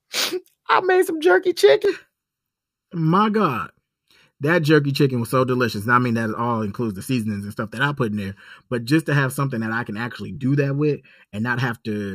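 Speech clip with channel delay (comb filtering) from 1.85 s to the end: one channel runs under a millisecond late before mono summing, cancelling evenly spaced frequencies from around 700 Hz, so the voice turns hollow and phasey.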